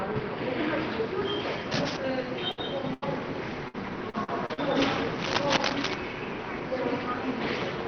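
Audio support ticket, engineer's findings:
Burst of packet loss, 2.51–2.59 s and 2.93–3.04 s. Jitter buffer conceals with a decaying continuation of the last sound (60 ms, then 85 ms), then playback resumes further on with 40 ms and 80 ms skipped. Unlike the robotic stretch, these are single isolated holes.

Lost packet rebuilt from error correction, 2.57–2.59 s and 3.02–3.04 s, closing each burst. Opus in-band FEC copy decoded, so no gap, but 20 ms of rougher, noisier audio. Distinguished from concealment by continuity rather than decay. No top-band dip, since the call path is already limited to 6 kHz at 20 kbps.

Repeated packet loss (robotic sound), 3.68–4.84 s. Six holes, longest 57 ms, about 19% of the stretch concealed and roughly a tenth of a second rebuilt from FEC. Choppy texture from back-to-back patching, not one clean dropout as at 2.5 s and 2.9 s.

Cable scratch noise, 5.15–5.94 s. 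Dense, uneven scratching bursts at about the level of the sound itself. Likely a worn cable, connector or control shifting contact resistance. It is added noise on top, not a gap or held tone, so it is not network loss.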